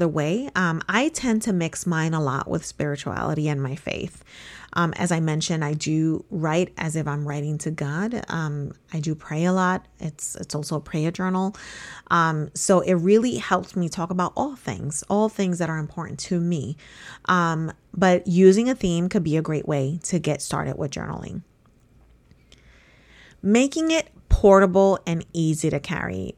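No technical faults occur anywhere in the recording, so there is nothing to describe in time order.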